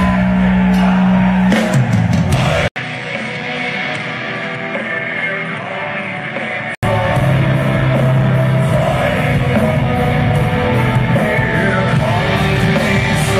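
At 2.68 s the sound drops out for 80 ms, then returns quieter by around 10 dB, duller, with nothing above 9.4 kHz and new low noise. This lasts until 6.83 s. The likely cause is an input switched to a poorer device.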